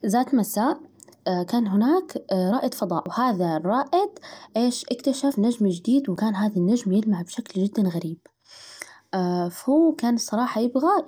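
Speech with four points where the sound jumps ahead, at 1.26, 3.06, 5.32 and 6.16 s, each skipping a few tens of milliseconds, likely dropped buffers from overruns.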